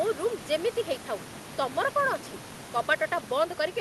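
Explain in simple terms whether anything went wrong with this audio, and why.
Nothing went wrong here: the faint background noise of the room is simply part of the original recording, sitting well below the speech, and the audio passed through the call system with only the ordinary coding a normal call applies, which trims the very highest frequencies.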